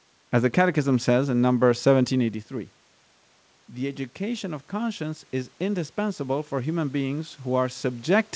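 Speech, in which the automatic gain control reacts to a drop of about 12 dB in the input level by raising its gain gradually, by about 6 dB, from 3.75 s to 8.12 s. This automatic gain rising makes voice and room noise swell together rather than staying steady.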